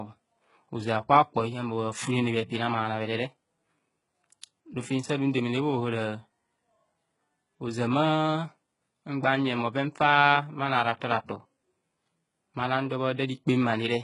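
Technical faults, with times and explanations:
Throughout, HE-AAC compression: the s sounds come out gritty and lispy, the treble has a metallic, pasted-on brightness with nothing above about 11.1 kHz, and the damage is heavy. It's likely a very low bitrate, around 12 kbps, rebuilding the top end from copied lower bands.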